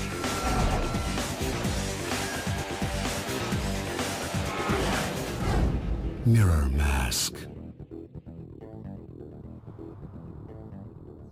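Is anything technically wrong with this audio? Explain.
Yes. Crude rate conversion runs throughout: samples were dropped or repeated, fitting a 48 kHz to 44.1 kHz change, leaving a gritty, inharmonic fizz about 25 dB down that tracks loud, bright sound, unlike steady hiss.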